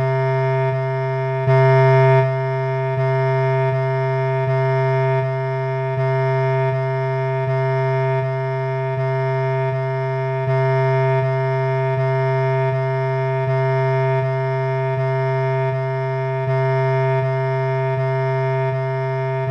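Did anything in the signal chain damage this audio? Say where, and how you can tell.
No, nothing in the chain audibly damaged this audio at any stage.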